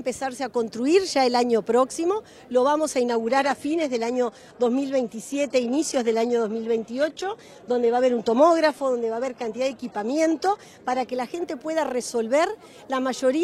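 From 3.08 s to 11.08 s an adaptive stream at a lower bitrate takes over abruptly, without a gap. The treble drops away, which fits a slowed connection forcing a 16 kbit/s HE-AAC rendition. A spectrogram shows a hard ceiling near 12.3 kHz, with blotchy upper bands.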